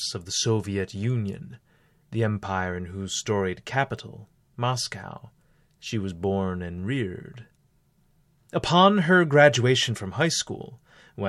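No technical faults can be heard in the recording. The speech runs without any event that points to a problem in capture, processing or playback.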